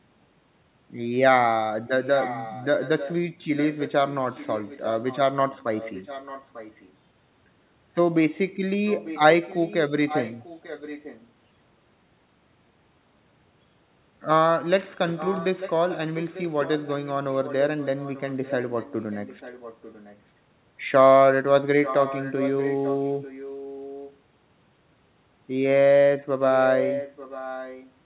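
An echo canceller on the far end's loudspeaker likely failed to remove what its microphone picked up, so the speech returns as an echo leak: a delayed copy trailing the original by about 0.9 s. It occurs at 2.04–3.16, 3.56–5.18, 5.49–6.92, 8.86–11.27, 15.16–20.19, 21.83–24.17 and 26.53–27.91 s. The copy sits about 10 dB below the speech in the first and last two stretches and about 15 dB below elsewhere, heard as a fainter, late second layer of the same speech.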